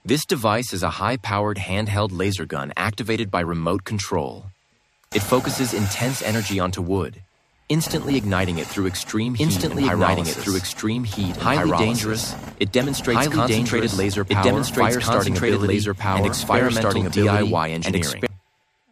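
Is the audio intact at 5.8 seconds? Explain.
Yes, the audio is intact at 5.8 seconds, with no dropout, click, distortion or other fault at that moment.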